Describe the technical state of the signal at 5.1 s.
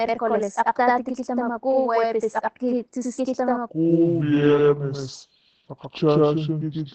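At 5.1 s, one channel runs 85.33 ms behind the other, which fits a 4096-sample buffer, and the two are summed to mono. This channel delay (doubling) makes the speech sound doubled, with a distinct slap echo trailing each syllable at equal level.

The audio also passes through Opus voice compression in its SILK mode, coding 20 ms frames at what sounds like a low bitrate near 12 kbps. The damage is plainly audible: the speech is muffled, hoarse and slightly robotic, with nothing above 15.5 kHz.

This moment also falls within a section at the wrong speed, running from 3.69 s to 6.95 s. Playback runs at 0.617 times the original rate, likely from fitting the audio to the wrong clock. Speed and pitch drop together, so the speech is slow, drawn out and roughly seven semitones deeper.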